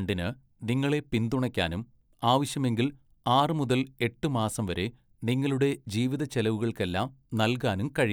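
No technical faults are audible.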